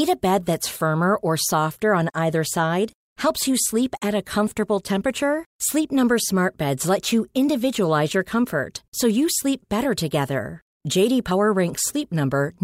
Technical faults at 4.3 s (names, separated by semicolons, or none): none